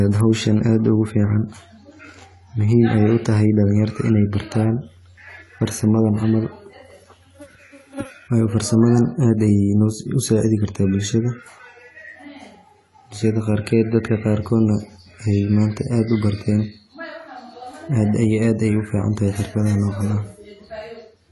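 AAC compression runs throughout the speech recording. Nothing is heard above 11.5 kHz, and the codec damage is plainly audible as a dull, smeared top with fizzy sibilants. The likely cause is AAC-LC quantising its frequency lines coarsely, which fits a bitrate near 32 kbps.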